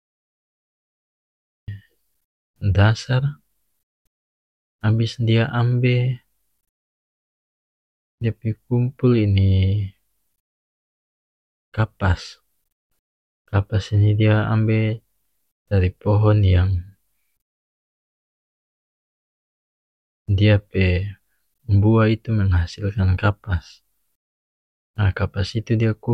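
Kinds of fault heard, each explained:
Cut-off start: The capture began late, after the talker was already under way. The clip holds digital silence until 1.68 s. Then speech enters abruptly in the middle of a sound. There is no natural attack or fade-in to lead into it.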